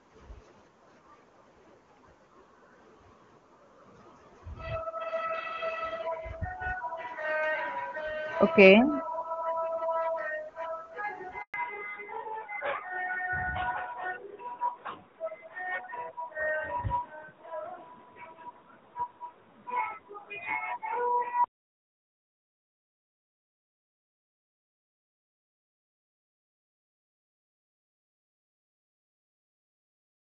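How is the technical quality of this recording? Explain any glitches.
The recording has two linked faults at the same instant: a brief silence followed by a lasting loss of bandwidth. Before that point the speech is carried by the AMR wideband (HD Voice) codec, and its clear, full-bodied sound suggests the top 23.85 kbit/s mode.

Handover gap, 11.42 to 11.54 s. The speech fades out within a few tens of milliseconds and stays silent for 120 ms. This happens when the call is passed from one network link to another and no speech frames arrive during the switch, so whatever was said in that window is lost. Ordinary packet loss sounds different. Loss concealment smears, repeats or buzzes the sound, while a handover gap is a plain, clean hole that ends with the new link already in place.

Fallback to narrowband, from 11.54 s to the end. Straight after the gap, everything above 4 kHz disappears and never returns. 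The speech turns duller and rougher. The call has dropped from wideband AMR-WB to narrowband AMR-NB at 12.2 kbit/s. A low bitrate inside the wideband codec would add rasp but keep the extended top end. An equaliser cut would not leave a hard ceiling at exactly 4 kHz. Here the ceiling appears as a sudden, permanent step right after the handover silence.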